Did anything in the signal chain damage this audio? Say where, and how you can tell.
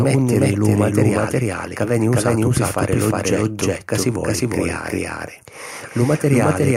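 Yes. A doubled audio track runs throughout. Every syllable of speech returns roughly 0.4 s later at about the same level, full-band and dry, with no room decay. The likely cause is a routing or edit stage that mixes in a second, late copy of the signal.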